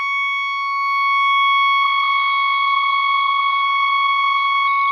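At 1.82 s the music goes through a call bitrate drop, and it lasts to the end. The encoder's rate falls from 48 kbps to 13 kbps. It stays at the lowest rate for about 1.86 s. With so few bits, the codec quantises much more coarsely and trims the top of the spectrum. The music turns muffled and dull. Textures go rough and watery. The bitrate does not fully recover before the clip ends.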